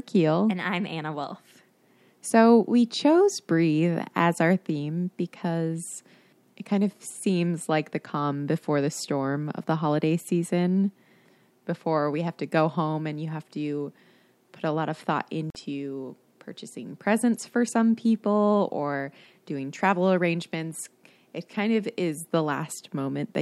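At 15.50 s the speech drops to silence for 46 ms, then resumes further on: likely a Bluetooth dropout, with packets arriving too late.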